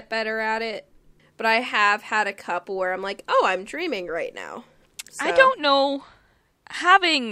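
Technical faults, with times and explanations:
No technical faults can be heard anywhere in the speech, and the signal stays steady and continuous throughout.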